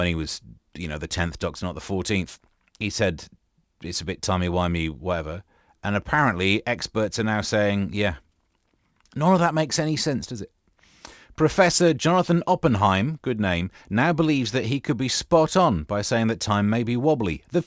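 Aliasing runs through the whole speech clip. The audio was resampled to a lower rate without an anti-aliasing filter, so content above the new Nyquist limit folded back into the band. The fold point sits at 8 kHz, which fits a conversion down to 16 kHz. Sibilants pick up a gritty, metallic edge from mirrored energy at unrelated frequencies, sitting about 20 dB below the signal, and the spectrum stays dense right up to 8 kHz.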